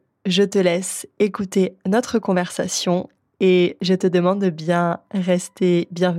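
Nothing goes wrong technically anywhere in this bit of speech, so there's no fault to point to at any moment.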